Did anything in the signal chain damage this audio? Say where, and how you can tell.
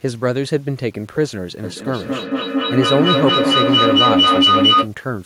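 Yes. Low bit depth without dither runs through the whole clip: a grainy distortion that tracks the speech sits roughly 35 dB below it and coarsens quiet passages. This points to a sample-format conversion stage, likely one that truncated the samples to about 8 bits without adding dither.

Feedback echo between two devices appears from 1.63 to 4.93 s in call processing. Speech comes back at intervals of roughly 200 ms and builds to about 5 dB above the original. A second device in the room is replaying the call into a microphone whose echo canceller can't remove it.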